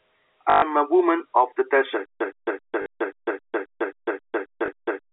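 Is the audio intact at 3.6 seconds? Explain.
No. A stutter with silent gaps runs from 2.05 s to the end of the clip, so 3.6 s falls inside it. The same 116 ms fragment of speech keeps returning every 267 ms, each time followed by about 151 ms of dead digital silence, heard through the narrow telephone band. The likely cause is a stalled player or stream that replays its last buffered fragment at each retry and then runs empty, so the real audio there is lost.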